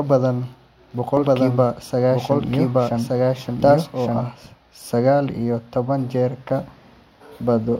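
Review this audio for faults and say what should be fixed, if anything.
From 1.17 s to 4.27 s the speech runs twice: a doubled audio track, with a second copy about as loud as the original and trailing it by roughly a second. It is most likely a slower capture path or a misaligned edit layering two copies. Unlike an echo or room reverb, the copy is full-band, never decays or takes on room colour, and cuts in and out abruptly at those times. Removing the late copy or routing only one capture path into the mix would prevent this.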